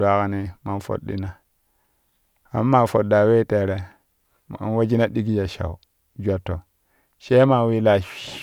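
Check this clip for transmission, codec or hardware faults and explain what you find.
Nothing in the speech points to a fault. There is nothing here to report.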